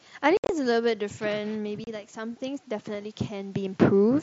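Speech recorded through a Bluetooth headset, with the light graininess on loud sounds typical of the mSBC headset codec. From 0.37 to 0.49 s the voice is chopped by abrupt holes, about 105 ms lost across 120 ms with the longest gap near 68 ms, and a further 30 ms is lost at 1.84 s. This is unconcealed Bluetooth headset packet loss: dropped voice packets between headset and phone were replaced by silence or an idle pattern rather than patched over. From 1.28 to 3.77 s voice and room noise swell together by about 4 dB. That is the automatic gain rising, as it slowly compensates for the input dropping about 11 dB when the talker moves away from the microphone around 1.5 s.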